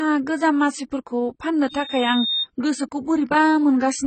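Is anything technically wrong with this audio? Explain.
Yes. Throughout the clip, likely AAC compression at a low bitrate, consistent with about 16 kbps, cuts off everything above 8.6 kHz and removes spectral detail, so the speech sounds dull and smeared with heavy codec damage.

From 1.69 to 2.47 s, a loudspeaker feedback squeal occurs when the microphone picks up its own loudspeaker. A 3.7 kHz tone swells over roughly 0.7 s until it is about as loud as the speech.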